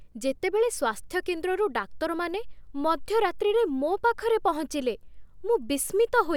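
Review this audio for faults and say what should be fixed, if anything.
Nothing to fix: no technical faults are audible anywhere in the speech, so no corrective work is needed.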